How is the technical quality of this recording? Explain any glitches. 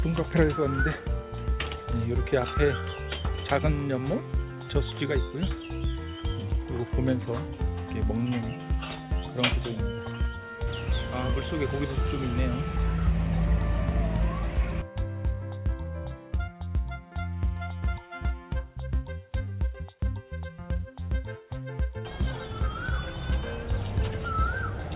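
No glitches turn up anywhere here: the audio comes through a call path with a narrow, phone-like bandwidth that stops at about 4 kHz, and nothing breaks up, drops out or jumps along the way.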